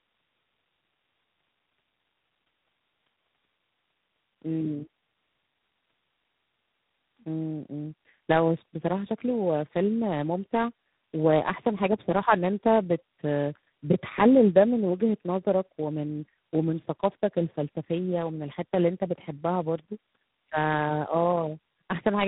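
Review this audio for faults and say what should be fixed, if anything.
Tandem speech coding runs throughout the speech. The call sounds like it was decoded and re-encoded at each network border, passing through AMR-NB, G.729A and finally G.726 at 24 kbit/s. Each coder worked on the previous one's damage, so roughness and warble build up and nothing above about 3.9 kHz survives. A single low-rate codec leaves one consistent texture, but here the artefacts are layered and worse than any one coder would cause. To prevent this, negotiate one end-to-end codec or enable transcoder-free operation.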